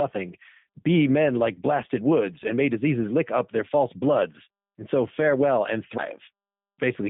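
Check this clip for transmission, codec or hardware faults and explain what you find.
Two faults are present: G.729 codec damage across the whole clip, and a CD skip late in the speech.

G.729 codec, throughout: the speech has been squeezed to 8 kbit/s by a low-rate VoIP coder that resynthesises each 10 ms frame from a vocal tract model, a pitch predictor and a handful of pulses. The damage is plainly audible as a rough, slightly synthetic edge. Only the 150 Hz to 3.7 kHz line band survives, so a spectrogram shows a hard ceiling with nothing above 3.7 kHz and a thin floor under 150 Hz.

CD skip, at 5.98 s, right after "so farewell and": a knock or disc flaw threw the laser onto a different turn of the spiral. The player muted very briefly, about 10 ms, and resumed from another point. The result is a small tick and an abrupt discontinuity in the speech. On a waveform it shows as a tiny flat gap followed by a signal that does not continue smoothly from what preceded it. 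A spectrogram shows a thin vertical break there.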